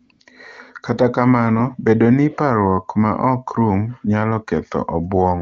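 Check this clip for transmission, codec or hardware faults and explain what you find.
AMR comfort noise replaces the real background twice at the very start of the clip, from 0.05 to 0.09 s (40 ms) and from 0.11 to 0.19 s (80 ms). The sending phone's voice activity detector judged the talker silent and stopped transmitting speech frames. The receiver then filled each gap with synthetic noise built from a rough description of the background's level and spectral shape. The actual room sound is briefly swapped for a smooth, steady hiss that switches in and out. The wideband AMR coding underneath sounds clean, which points to one of its higher rates.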